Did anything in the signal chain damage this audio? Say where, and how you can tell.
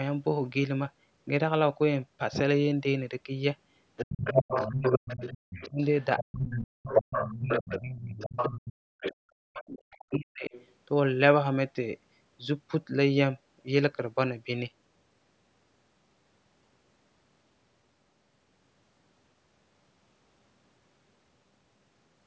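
Yes. The damage is in the call processing, at the acoustic echo canceller. From 3.96 to 10.72 s the other side's voice is leaking through, sitting only about 5 dB below the talker's speech. That is far too loud for residual room reflection. The likely cause is that the loudspeaker played the far end into the microphone and the canceller failed to subtract most of it, so a second voice runs under the talker for nearly seven seconds.

The same stage produces speech suppressed in double talk in two spans, 4.04 to 8.35 s and 9.15 to 10.52 s. In the first, the talker's level repeatedly dips by as much as roughly 35 dB, about three seconds of it in total. In the second, drops reach around 40 dB over about a second. Both sides were talking at once, and the canceller likely could not tell near speech from echo, so it attenuated both together.

Between the two suppressed spans there is a separate, brief event: the background gated by the echo canceller, from 8.73 to 8.87 s. 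The room sound falls by about 31 dB for roughly 150 ms, then returns. During loudspeaker playback the canceller clamped the microphone path hard and released it a moment later, which leaves a short hole in the ambience.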